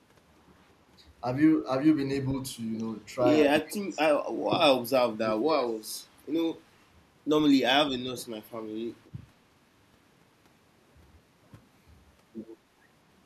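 The speech sinks sharply and breaks up from 3.51 to 4.11 s, 4.73 to 4.93 s and 5.11 to 5.87 s, falling by roughly 20 to 30 dB at its deepest. This is likely speech suppressed in double talk: an echo canceller attenuating the near talker while the far side spoke.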